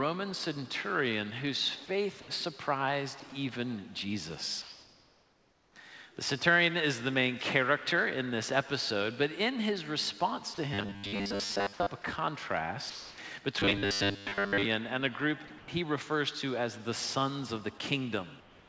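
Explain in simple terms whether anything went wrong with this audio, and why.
A few things went wrong. First, sound dropped by the voice detector: at 3.2 s and again at 10.54 s, a tiny slice of the sound (20 ms, then 40 ms) vanishes into steady noise. The sender likely mistook that quiet bit for background and briefly stopped transmitting.

Second, comfort noise in place of the background: from 4.62 to 5.76 s, 12.90 to 13.18 s, 15.58 to 15.68 s, and 18.40 s to the end, the real background turns into a flat, featureless hiss. That's likely the receiver filling pauses with synthetic noise while the sender went quiet.

Third, robotic sound from repeated short buffers: from 10.74 to 11.88 s and 13.60 to 14.65 s, the sound turns into a metallic buzz locked at 100 Hz. Most of it is likely a roughly 10 ms chunk being replayed over and over because fresh audio arrived too slowly.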